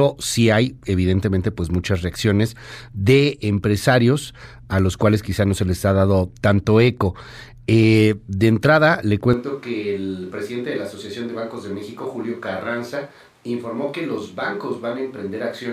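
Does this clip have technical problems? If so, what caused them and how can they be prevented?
Yes. From 9.33 s to the end the speech abruptly turns roomy and hollow, thinner in bass, about 10 dB quieter, with room noise about 30 dB below it. This likely comes from a switch to a distant microphone, and the instant change distinguishes it from gradual drift. Monitor the close microphone throughout recording and check its connection and battery.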